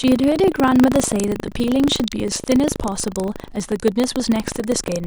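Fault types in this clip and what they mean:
Buffer tearing: the writer filling the ring buffer and the hardware reading it have drifted out of step, so their positions cross inside each period. A small slice of every 40 ms period, well under a tenth, replays speech from one lap earlier, around 150 ms old, with abrupt joins at both edges. The speech carries a continuous rough, robotic buzz at 25 Hz for the whole clip, audible wherever there is signal.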